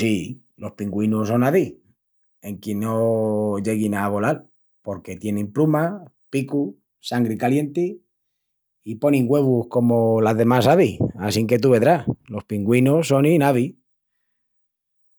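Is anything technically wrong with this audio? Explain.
No, nothing is technically wrong with this audio.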